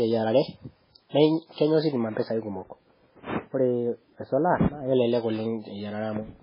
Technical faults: MP3 compression

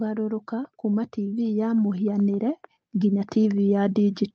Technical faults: automatic gain rising

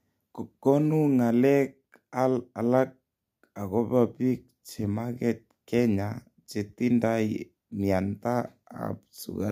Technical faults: none

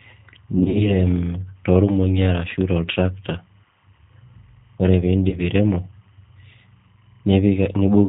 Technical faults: timecode bleed; G.729 codec; VoIP packet loss concealed by the speech codec

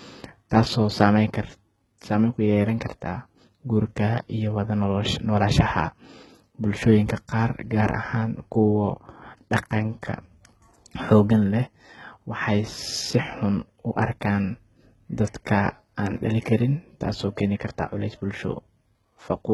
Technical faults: HE-AAC compression

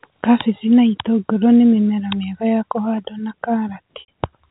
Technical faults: packet loss with pitch repetition

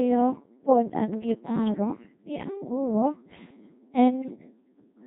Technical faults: Codec 2 vocoder; bit errors on digital voice radio

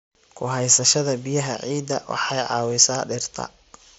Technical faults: none

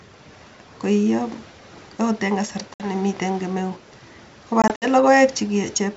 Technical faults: packet loss on an ADPCM call

